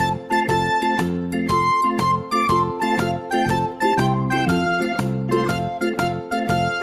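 Nothing goes wrong anywhere in this audio, so there's no fault to point to at any moment.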